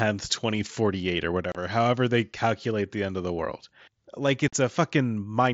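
At 1.52 to 1.55 s, just before "however they calculate the", and again at 4.48 to 4.53 s, right after "of the world like", the speech drops out in unconcealed Bluetooth headset packet loss. Voice packets between headset and phone never arrived, and nothing was synthesised to cover them, so silence fills gaps of about 30 ms and 45 ms with hard edges. The gap lengths fit a handful of consecutive lost frames on the mSBC link, whose light grain is audible on louder syllables.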